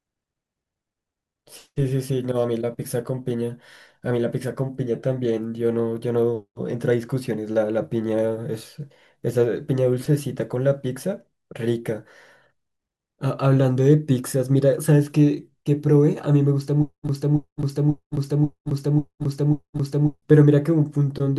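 At 17.09 s the speech locks into a broken-record loop that runs until 20.22 s. A fragment about 0.54 s long plays six times, back to back. Each pass is identical, so the sound stutters with a steady, mechanical rhythm. The likely cause is a stalled player, encoder or stream that kept resending the last piece it held. Whatever speech belonged in those three seconds never arrives.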